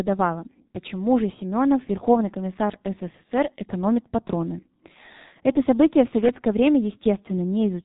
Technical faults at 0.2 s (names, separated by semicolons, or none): G.723.1 codec